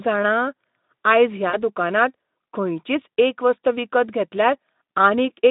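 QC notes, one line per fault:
1.49–1.58 s, VoIP packet loss concealed by the speech codec: about 40 ms of audio goes missing, which fits two lost 20 ms packets. The decoder fills the gap by repeating its last pitch and spectral envelope at falling gain, so the sound smears into a short buzzy or noisy, fading stretch. Because each decoded frame depends on the previous one, the level and clarity take a moment to recover after the stream resumes, inside the narrow Speex line band of about 150 Hz to 3.7 kHz.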